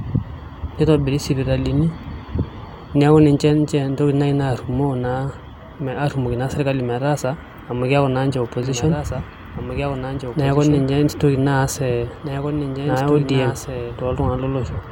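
A doubled audio track runs from 8.63 s to 14.25 s: a second, full-band copy of the speech sits about two seconds behind the original and roughly 5 dB quieter, so each phrase is heard again under the next one. The copy has no reverberant tail or room colouring, and it cuts in and out abruptly at those times. The likely cause is the same signal being captured a second time through a slower path and mixed back in.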